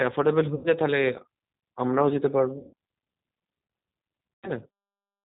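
Throughout the speech, the audio carries the sound of the G.729 codec at what sounds like its 8 kbit/s rate. Each 10 ms frame is rebuilt from a vocal tract filter, a pitch predictor and a few pulses. The damage is plainly audible: the voice is rough and slightly synthetic, and nothing above 4 kHz survives, leaving it narrow and muffled.

Three dropouts show VoIP packet loss concealed by the speech codec. At 0.55–0.68 s about 90 ms of audio is missing, consistent with three lost packets. At 2.58–2.73 s about 150 ms is missing, suggesting five. At 4.34–4.52 s about 90 ms is missing again. In each gap the decoder stretches the last pitch and filter into a buzzy tone or coloured noise that fades. Because each frame builds on the one before, the voice stays weak or distorted briefly after the gap ends.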